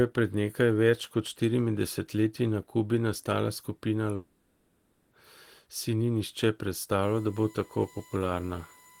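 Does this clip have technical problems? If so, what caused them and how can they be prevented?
Yes. A long network dropout, likely from lost packets, leaves about 0.96 s after "nastala skupina" filled with a fading concealment buzz, from 4.15 to 5.13 s. A jitter buffer with retransmission or a steadier connection would prevent it.

USB whine from bus current leaking into the power or ground adds a steady 1 kHz tone about 30 dB below the speech from 7.03 s to the end. A ground-loop isolator, powered hub or separate supply for the audio interface would prevent it.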